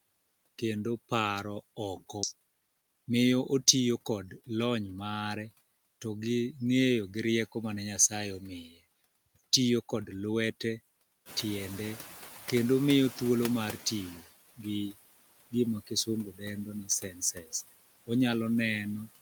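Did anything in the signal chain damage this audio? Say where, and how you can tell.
Yes. Throughout the speech, the background sinks between phrases and swells beneath them. That is the call-processing stage: noise suppressor artifacts from a suppressor pulling steady noise down by about 18 dB frame by frame.

At 2.23 s, right after "kendo paro oko", the speech jumps forward with no gap, roughly a second missing. This is a skip ahead at the network or jitter-buffer stage: already-queued audio was discarded to shed about a second of delay, splicing both sides directly.

From 2.33 to 4.43 s, leading into "lony mare to gi", the speech sounds hurried yet keeps its pitch, running at 114% speed. That is jitter buffer speed-up: short pitch-period slices, around 300 ms in total, were removed repeatedly to drain excess buffered audio.

From 8.62 to 8.79 s, and again from 16.84 to 17.53 s after "gima kisungu dendo ni", parts of the speech sound swallowed and faint, dipping by about 13 dB and about 15 dB. 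That is speech cut by the noise suppressor, which misread those soft sounds as background and attenuated them.

From 11.25 to 14.21 s, the room noise, which jumps about 13 dB near 11.5 s, first comes through with less reduction, then gradually fades over roughly 3 s. This is the noise suppressor catching up: its noise estimate lagged the sudden rise before settling at about 12 dB of reduction.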